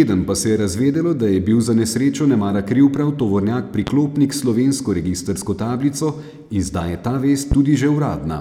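A loud pop cuts into this speech clip from 3.87 to 3.90 s and again from 7.52 to 7.55 s, each a single sharp thump rising well above the speech, which carries on underneath. The likely cause is a brief voltage spike, from static or a switching or driver glitch, entering the signal path.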